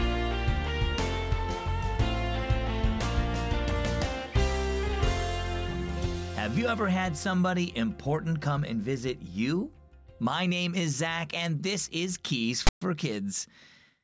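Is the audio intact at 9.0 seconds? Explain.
Yes, at 9.0 seconds the audio is intact, with no dropout, click, distortion or other fault to be heard at that moment.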